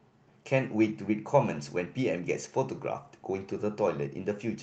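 Throughout the speech the timing feels faintly rushed and uneven, a sign of clock drift between sender and receiver. The sender's clock runs roughly 4 percent fast, so the receiver's jitter buffer keeps filling faster than it is played out and never settles.

From 0.19 s to 4.56 s, that surplus shows up as repeated timing corrections. A slightly hurried pace, about 105 percent of normal speed, comes with edits at uneven intervals as the receiver trims short slices of audio to keep up. The call codec path, which cuts off content above 8 kHz, adds its own coding texture underneath.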